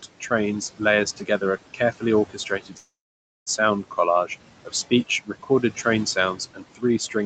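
A speech recording passed through a call's noise suppressor, which pulls the background down by about 18 dB frame by frame, producing noise suppressor artifacts: the room noise drops away between phrases and swells back under them. The same suppressor also mistook parts of the speech for noise, so this is speech cut by the noise suppressor, turned down by about 12 dB from 0.02 to 0.31 s and from 1.17 to 1.43 s, and by about 16 dB from 1.74 to 4.31 s and from 4.65 s to the end, making soft sounds and word endings swallowed and faint. At 2.77 s the audio stops for roughly 0.7 s, most of it (about 0.55 s) dead silence, then resumes at 3.50 s exactly where it left off with nothing lost. This is a call audio freeze, likely from packets held up in transit until the jitter buffer ran dry.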